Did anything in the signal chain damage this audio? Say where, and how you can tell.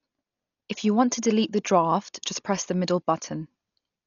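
Yes, at the codec stage, and it runs through the whole clip. The speech is dull, with nothing above about 6.9 kHz, and there's a rough, fluttery haze clinging to the voiced parts. That's likely Dolby Digital compression run hard: at a rate that fits something as low as 40 kbps, the encoder narrows the band and starves many frequency lines of mantissa bits, so the decoder fills them with dither noise. The damage here is heavy.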